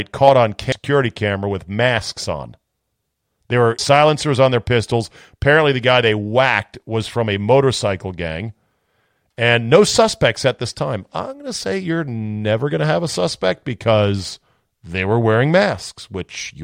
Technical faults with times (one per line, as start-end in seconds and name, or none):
0.72 damaged data in a compressed stream
3.79 damaged data in a compressed stream